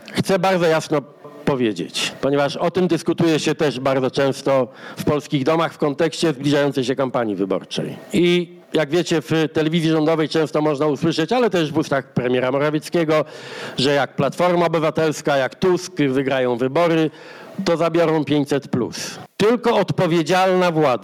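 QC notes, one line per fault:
Throughout, gain pumping: the level drops sharply under each loud sound, swinging by something like 20 dB, so loud and soft passages sit unnaturally close in level and the whole clip sounds squashed. The likely cause is input gain set far too high with a fast limiter or compressor clamping each peak. Unlike a noise gate, a compressor turns loud parts down rather than cutting quiet parts to silence.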